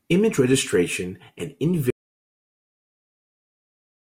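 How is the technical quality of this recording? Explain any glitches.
The recording has two clear faults, both in its first half, and the second one removes everything after it.

At 1.41 s there is a single sharp click. This is dropped samples. A tiny slice of the stream, under a millisecond, is missing. The waveform jumps straight from one value to a later one. Nothing audible is lost. The sudden step is what you hear. On a spectrogram it shows as one thin vertical line. A brief buffer or transfer hiccup is the likely cause.

From 1.91 s to the end, the audio drops out to silence. The speech stops mid-flow and never returns. The gap is silent, not quiet room tone. That means the input itself was lost while recording carried on, writing silence. A disconnected device, a broken link or an accidental mute is the likely cause. Whatever was spoken after that point is gone and cannot be recovered.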